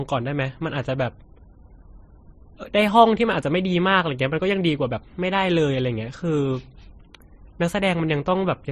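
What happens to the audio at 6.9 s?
At 6.9 s, as across the whole clip, the speech has likely been passed through one low-bitrate lossy codec and then re-encoded by another. The sound points to an MP3 stage near 34 kbit/s followed by Vorbis near 35 kbit/s. This is transcoding between lossy codecs. The second encoder spends its limited bits reproducing the first one's artefacts while adding its own, so both sets of artefacts are heard together. Nothing remains above 13.1 kHz.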